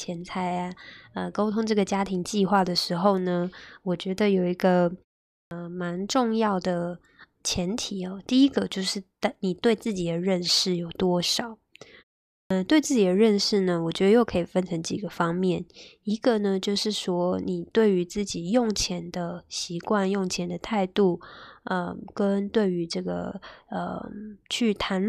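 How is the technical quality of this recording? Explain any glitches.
Two glitches, both the same kind: clipped start after a pause, at 5.32 and 12.32 s. After short gaps of about 0.37 s, the output device dozes off and wakes late, swallowing roughly 190 ms, so speech jumps in abruptly, missing its opening sounds.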